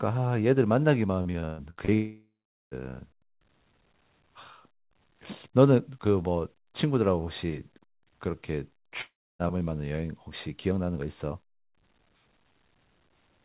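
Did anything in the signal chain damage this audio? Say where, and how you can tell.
Yes. The network kept losing packets from 1.22 to 1.91 s, six gaps of up to 126 ms each. Concealment repeated the last sound across them, leaving choppy, robotic speech.

At 1.94 to 2.74 s and 9.01 to 9.42 s, a likely long network dropout: a fading buzz gives way to silence, then speech resumes with that stretch missing.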